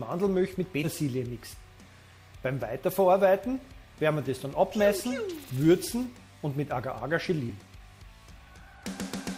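At 0.83 to 0.87 s the audio lurches forward: compressed frames were skipped, roughly a tenth of a second of material simply never plays, likely because the decoder threw out damaged frames or they were missing. The jump size fits whole frames of about 10 ms each. Another, slightly shorter skip hits at 7.49 s.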